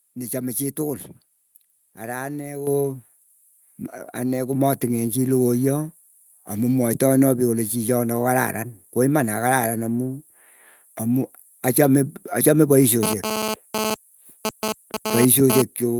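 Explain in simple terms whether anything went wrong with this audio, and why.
Two things went wrong. First, the microphone volume was stepped up twice. The call software decided the microphone was too quiet and turned up its input setting in one sudden jump, rather than gradually. Because the whole input is boosted at once, the voice and the background noise get louder together. The first jump, at 2.67 s right after "ara ane", is the bigger one. A smaller second jump comes at 4.53 s, just before "chii lokoya amu mwaetaena".

Second, from 13.03 s to about 15.6 s there is GSM phone buzz. A nearby 2G mobile phone was sending data in short radio bursts, about 217 times a second. The audio circuitry picked up those pulses and turned them into sound. The result is a harsh, raspy buzz around 217 Hz that has nothing to do with the speech. It is fairly loud compared with the voice, and because the phone was transferring data rather than holding a call, the buzz comes and goes.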